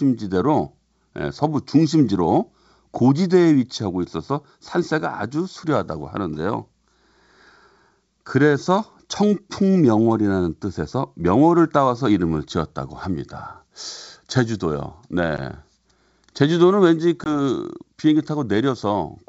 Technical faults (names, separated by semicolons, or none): channel delay (comb filtering); packet loss on an ADPCM call